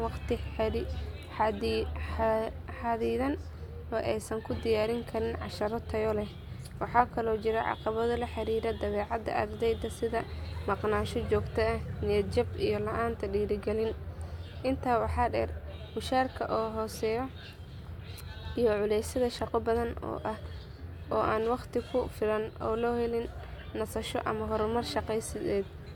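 No technical faults can be heard anywhere in the recording, and the speech signal stays continuous and stable throughout.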